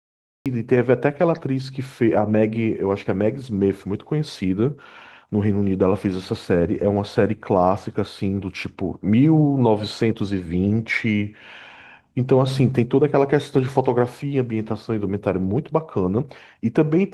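Speech jumps in mid-sound at 0.46 s out of dead digital silence, with no natural attack: a cut-off start, the recording having begun late.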